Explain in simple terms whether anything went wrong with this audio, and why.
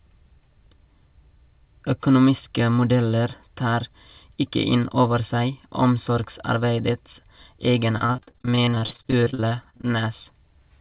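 From 7.98 s to 9.85 s the speech breaks up into a rapid run of short dropouts, a fault known as repeated packet loss (robotic sound). Pieces of the call audio failed to arrive in time, dozens of times over those two seconds, each gap no longer than about 46 ms. The receiver covered each hole by stretching the last bit of sound, so roughly two-fifths of that stretch is filler. The result is choppy speech with pieces missing. Throughout the clip, the call line also removes everything above 4 kHz.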